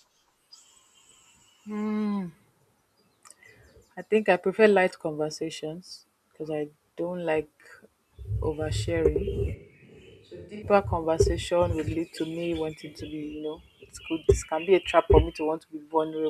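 Switch to a distant microphone from 9.55 to 10.62 s: the speech suddenly turns hollow, roomy and about 10 dB quieter, likely because the close microphone dropped out.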